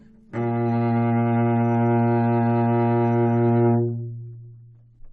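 No technical faults are audible.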